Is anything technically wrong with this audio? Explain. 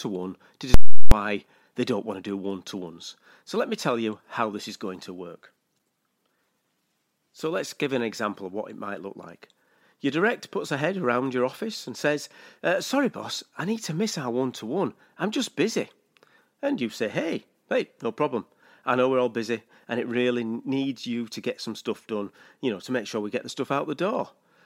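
Yes. From 0.74 to 1.12 s, just after "one to", there are invalid numbers at full scale. A calculation produced infinite or invalid values that were forced to the extreme sample value. The output holds there for about 0.37 s, which fits a 16384-sample block. You hear a loud pop where the block starts and another where it ends, with nothing between them. A plain dropout would give silence without those two bangs.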